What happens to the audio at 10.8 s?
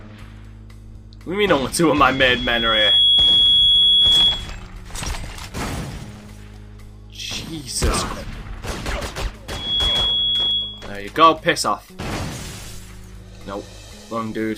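A loudspeaker feedback squeal is sounding, from 9.48 to 10.97 s. A 3.3 kHz tone swells within a third of a second, looping mic-to-speaker, about 5 dB above the audio.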